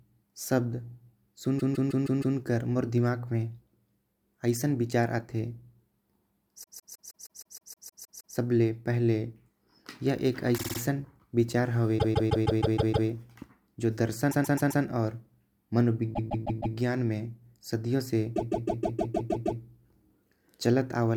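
Repeated frames stutter the speech at 1.58–2.37, 6.62–8.35 (before "सब ले पहले"), 10.57–10.78, 11.98–13.08, 14.30–14.83 (after "जो दर्शन"), 16.13–16.76 and 18.35–19.61 s. Compressed blocks of about 157 ms, or 52 and 131 ms, replay 4 to 11 times. The longest run adds 1.7 s.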